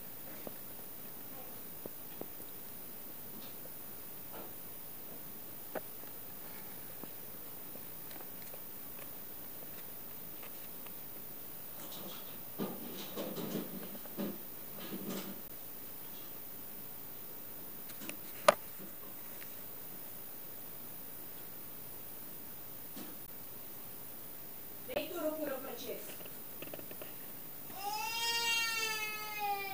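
The audio drops into a block of digital silence three times. The first is at 15.48 s and lasts 15 ms. The second is at 23.26 s and lasts about 17 ms. The third runs from 24.94 to 24.96 s, a 20 ms gap. Each time the sound cuts out and returns with no fade, heard as a tick or a tiny hole. This points to an output buffer not being filled in time.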